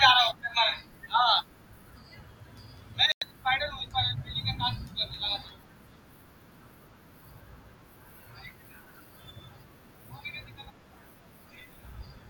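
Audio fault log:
3.12–3.22 s, digital broadcast dropout: the speech falls to clean silence for about 0.1 s, then resumes further on, with whatever was said in the gap missing. The receiver stopped getting decodable frames and muted until valid ones returned. A gap this long fits roughly three lost frames. An analogue fade would leave hiss or static in the hole, and a buffer stall would pause and continue without skipping. Here the hole is silent and the programme moves on.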